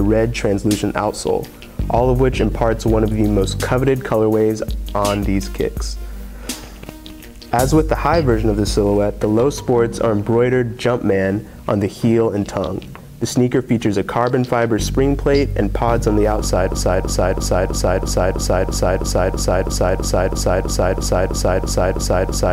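At 16.72 s a broken-record loop starts: a 0.33 s fragment repeats back to back, about 18 times, to the end, likely from a stalled player or stream.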